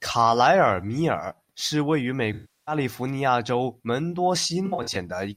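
At 2.33 to 2.75 s, between "是位于美" and "利福尼亚", AAC frame loss with concealment fills in about 340 ms. That points to around 16 lost frames. The decoder stretches the last good spectrum, then fades. At 4.65 to 4.97 s, after "亚州门多", scattered losses leave short smeared patches, the longest about 70 ms.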